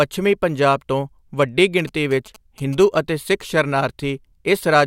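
From 1.79 s to 2.84 s, GSM signalling bursts occur during the speech. A nearby 2G phone is exchanging short control messages with the network, not carrying a call. Its radio pulses repeat at about 217 Hz. The audio circuit rectifies them and turns them into audible buzz. The result is a galloping dit-dit-dit of short buzzes. It sits roughly 25 dB below the speech.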